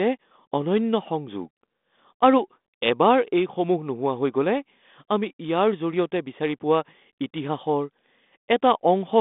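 No technical faults are audible.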